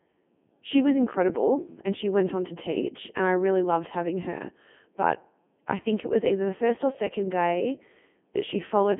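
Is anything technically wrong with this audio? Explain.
Yes. The Codec 2 vocoder is audible throughout the speech, with heavy damage consistent with its top mode of about 3.2 kbit/s. Rather than keeping the waveform, the decoder rebuilds the voice from sine waves driven by transmitted pitch, voicing, energy and a coarse spectral envelope. The result sounds robotic and buzzy, with a synthetic, metallic texture in place of natural vocal detail, and the band is confined to roughly 200 Hz to 3.4 kHz.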